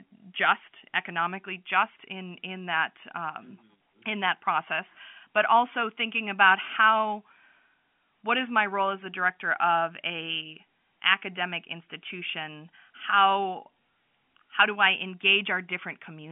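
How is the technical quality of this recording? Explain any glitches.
Nothing stood out on listening; the speech is carried over ordinary G.711 telephone coding, so it keeps the narrow line band with nothing above 3.6 kHz, and no glitches could be heard.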